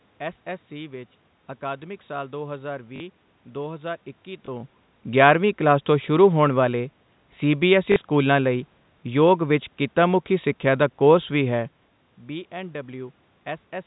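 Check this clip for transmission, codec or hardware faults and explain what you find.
The clip has one kind of transmission fault, occurring three times.

Packet loss with last packet repeated occurs at 2.96–3.00 s, 4.46–4.48 s and 7.92–7.96 s. Audio went missing for 40 ms, 20 ms and 40 ms, which fits two, one and two lost 20 ms packets. The receiver filled each gap by replaying the last good packet. That copy doesn't line up with the pitch cycle. The longer gaps produce a brief robotic stutter with a 50 Hz buzz. The level change near 4.5 s is the talker moving, not part of this fault.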